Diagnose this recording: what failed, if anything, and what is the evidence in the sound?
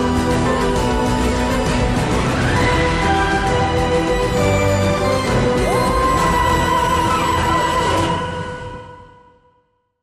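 No fault found in this recording.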